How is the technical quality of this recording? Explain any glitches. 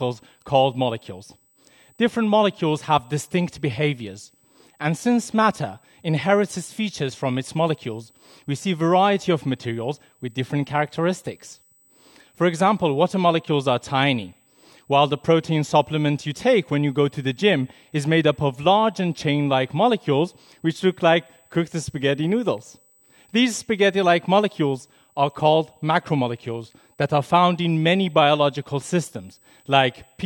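The recording carries one steady fault from start to finish: USB whine. A fixed, thin, high-pitched tone sits at 8 kHz through the whole clip, roughly 40 dB below the main sound. It comes from the USB bus drawing current in 125-microsecond microframes, a rhythm of 8,000 pulses per second that leaks into the audio through shared power or ground. A spectrogram shows it as a narrow, unbroken horizontal line at 8 kHz. At that low level it is hard to spot in the waveform.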